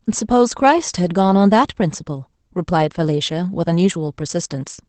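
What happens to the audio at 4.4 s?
At 4.4 s the speech carries the Opus voice compression heard across the whole clip. The sound fits a SILK-mode coder at around 12 kbps, which trims the band to wideband and codes the excitation coarsely, so it sounds muffled, hoarse and slightly robotic. A spectrogram shows nothing above 8.6 kHz.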